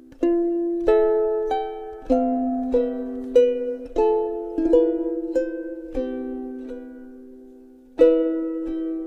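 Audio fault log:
No technical faults can be heard anywhere in the recording.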